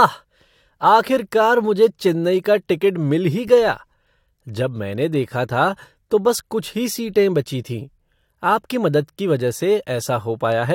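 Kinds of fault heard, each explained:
No technical faults can be heard in the speech; the signal holds steady throughout, with no interruptions, distortion or level problems.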